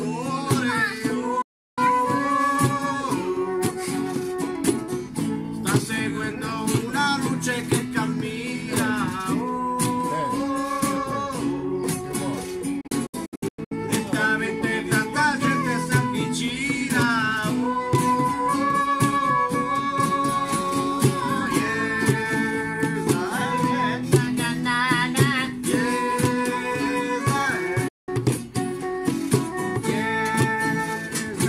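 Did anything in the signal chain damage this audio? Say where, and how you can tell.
Yes. The sound fades out within about 8 ms from 1.42 to 1.78 s and from 27.88 to 28.09 s, and breaks into short holes between 12.81 and 13.72 s. This is digital broadcast dropout at reception: the receiver muted on lost or corrupt frames, so that audio is gone.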